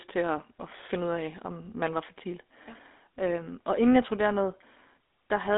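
Speech, buzzy and gravelly throughout, with nothing above 3.8 kHz. This is GSM full-rate codec damage, where coarse pulse excitation consistent with a 13 kbps stream roughens the sound.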